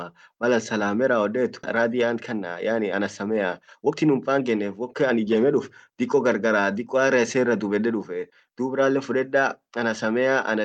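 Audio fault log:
1.63–1.65 s, skip ahead: about a second of speech is dropped and the two sides are spliced with no gap, showing as an abrupt waveform seam with no silence.
1.77–6.47 s, jitter buffer speed-up: repeated removal of pitch-period-sized pieces runs the speech at 111% speed at unchanged pitch, about half a second shorter overall. On the spectrogram the harmonics keep their spacing while syllables look compressed in time.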